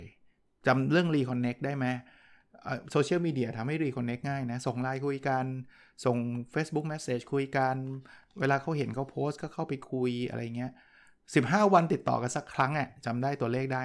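Nothing in this recording stands out as a technical problem; the speech runs along without a single glitch worth pointing to.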